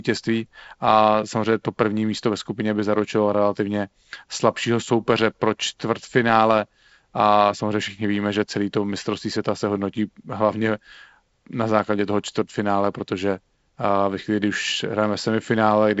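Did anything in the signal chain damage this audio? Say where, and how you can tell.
No, nothing in the chain damaged this speech; it rides a G.722 wideband telephone path whose light coding texture fits a 48 kbit/s mode, with nothing above 7.7 kHz.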